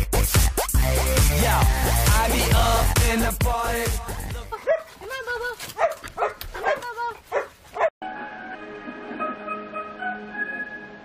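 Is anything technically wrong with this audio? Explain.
Yes. Three brief glitches break into the sound, at 0.73 s, at 4.52 s, and from 8.53 to 8.56 s. These are damaged data in a compressed stream. Bytes in the encoded file were lost or corrupted at those points, so the decoder misread those frames, lost sync, and produced garbage until it found the next valid frame header and resumed normal decoding.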